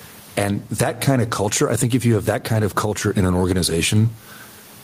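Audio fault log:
Throughout, gain pumping: the input gain is likely set far too high, so a fast limiter clamps down on each loud burst of speech and releases in the pauses, swinging level by roughly 20 dB, leaving the speech flattened and squashed.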